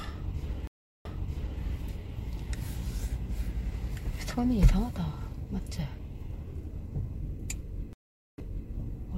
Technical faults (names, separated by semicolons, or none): stream reconnect